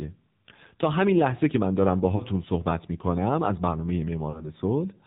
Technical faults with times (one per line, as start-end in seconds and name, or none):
0.00-5.06 AMR narrowband mobile codec
2.16-2.22 lost AMR speech frames
4.30-4.48 lost AMR speech frames